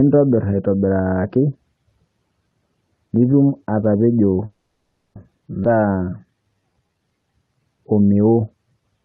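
Right after "nituum atapejoo", from 4.45 to 5.17 s, a call audio freeze fills 700 ms with a fading buzz, most likely because packets were held up and the jitter buffer ran dry. On a spectrogram this shows as smeared horizontal bands decaying into a brief silent notch. At 5.63–5.66 s a skip ahead drops about a fifth of a second, and the waveform joins its two sides almost seamlessly with an abrupt jump. From 5.69 to 7.06 s a jitter buffer slow-down stretches the speech to 84% speed by repeating pitch periods, adding 228 ms. The result sounds drawn-out, with visibly repeated cycles in the waveform. Throughout, the Opus call path's spectrogram stops cleanly at 12 kHz.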